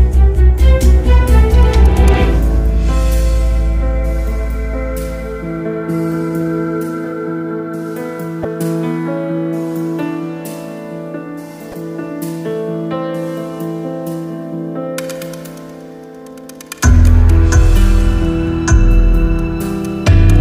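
Audio with damaged data in a compressed stream: brief blips at 8.41–8.45 s and 11.71–11.74 s, where corrupted frames throw the decoder out of sync until it finds the next frame header.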